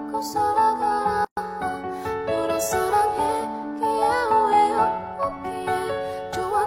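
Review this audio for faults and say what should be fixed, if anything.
A gap at a join of encoded pieces opens from 1.25 to 1.37 s, a silence of about 125 ms with smeared edges. Separately encoded pieces, apparently about 6 s long, were joined with each encoder's start delay and final-frame padding left in. Unlike a dropout, the sound resumes exactly where it stopped, with nothing missing. To prevent it, trim the encoder delay and padding at each join, or encode the whole programme in one pass.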